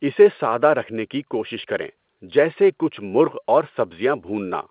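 Listening to this speech recording, nothing technically amiss stood out at any point, with the sound carrying the narrow, telephone-like band that fits standard G.711 A-law coding at 8 kHz.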